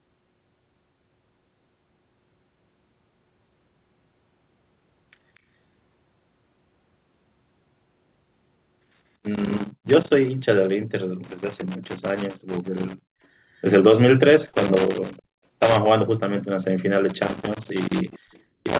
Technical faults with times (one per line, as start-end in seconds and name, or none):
4.62-6.42 loose connector crackle
8.34-10.14 loose connector crackle
11.24-13.04 loose connector crackle
14.46-15.76 loose connector crackle
15.17-15.22 echo leak
17.09-18.79 loose connector crackle
18.11-18.40 echo leak